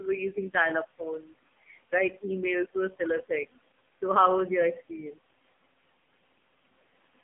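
From start to end the clip carries noise suppressor artifacts: the suppressor cuts bands it judges to be steady noise by about 17 dB, frame by frame, so the room noise, sitting about 19 dB below the speech, drops in the gaps and returns under the speech.

Throughout, the speech also passes through the AMR narrowband mobile codec, confined to 150 Hz to 3.5 kHz with nothing above 3.5 kHz. Its pulse-driven vocal-tract model is heavily strained, giving a buzzy, synthetic quality consistent with a low AMR-NB mode around 6 kbit/s.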